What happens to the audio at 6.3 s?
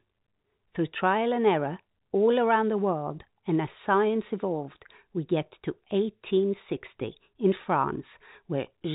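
At 6.3 s the speech carries on intact, with only the narrow telephone band of its G.711 coding, nothing above about 3.8 kHz.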